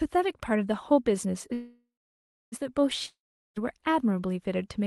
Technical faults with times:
1.53-2.54 call audio freeze
3.06-3.58 long network dropout

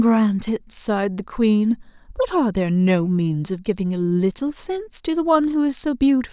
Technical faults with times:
none

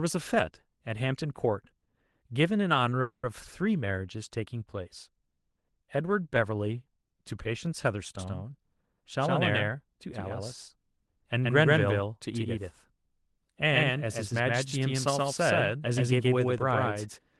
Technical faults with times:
3.01-3.31 call audio freeze
8.19-17.40 doubled audio track
8.51-11.01 jitter buffer speed-up

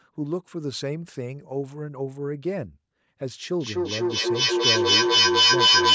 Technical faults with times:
3.61-5.95 feedback echo between two devices

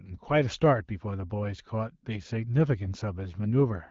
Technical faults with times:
none

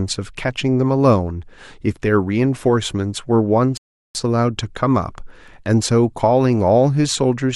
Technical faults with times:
3.77-4.15 rebuffering stall

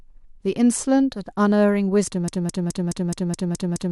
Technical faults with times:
2.28-3.91 broken-record loop

